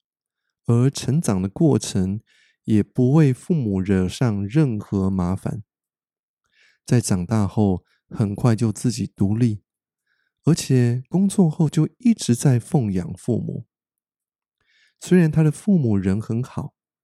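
No technical faults occur at any point in the recording.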